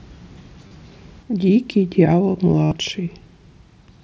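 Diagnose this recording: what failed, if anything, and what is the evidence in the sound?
Concealed Bluetooth headset packet loss occurs at the radio link. At 0.68–0.71 s a 30 ms run of four lost frames becomes a brief buzzy tone. At 2.65–2.72 s a 67.5 ms run becomes a held buzzy tone with a small warble on recovery. The receiver repeated the best-matching recent waveform. The mSBC wideband band limit remains audible.

One channel drops out from 1.23 s to the end. The level falls abruptly by about 6 dB and stays down. The likely cause is one stereo channel going silent before the mono sum. This halves whatever both channels shared. Material only in that channel vanishes.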